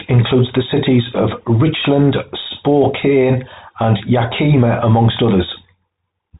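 From start to finish the speech sounds boxed-in and telephone-thin, with nothing above about 3.8 kHz and a clearly audible grainy roughness. This is the Bluetooth CVSD headset codec, which encodes one up-or-down bit per sample, fitting a 64 kbps link, and its adaptive steps audibly distort the signal.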